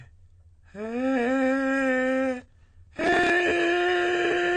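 AAC compression runs through the whole music clip: nothing is heard above 9 kHz, and the top end sounds dull and smeared, with a warbling fizz on sustained sound. The cause is likely AAC-LC coding at a low bitrate, around 32 kbps, which starves the upper bands of bits.

Processor overload crackle appears from 2.41 to 3.30 s. The processor missed dozens of deadlines in a row on very short buffers, around 1.5 ms each. Every missed buffer was skipped, leaving a hard-edged gap, and together the gaps form a gritty, tearing crackle over the music until the load passes.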